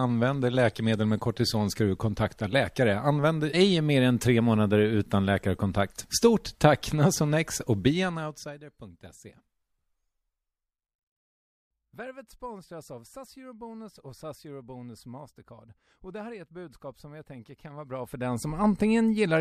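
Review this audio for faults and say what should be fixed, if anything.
Zipper noise, 17.71 to 18.63 s: a level change of around 20 dB is applied in unsmoothed steps, about a hundred a second, each stepping audibly and producing a fine ticking over the speech. Ramp gain per sample or interpolate it across each buffer so every level move stays seamless.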